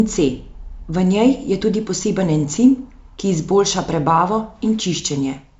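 No technical fault can be heard in the speech; it has the bandwidth of G.722 wideband telephone coding, with the full range up to about 7 kHz present and only faint traces of the coding itself.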